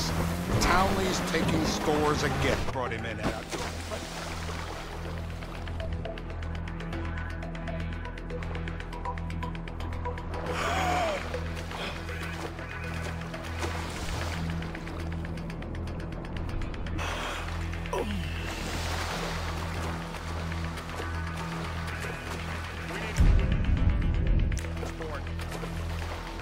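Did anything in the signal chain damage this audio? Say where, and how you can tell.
Yes. Compressed frames skipped at the codec or decoding stage: whole frames, roughly 46.4 ms each, never reached the output, either missing from the file or rejected as damaged. The audio jumps forward at 2.67, 3.28, 10.24, 14.33, 16.33, 16.98 and 19.62 s, losing around half a second each time, about 0.7 s at 2.67 s and around a full second at 16.33 and 16.98 s.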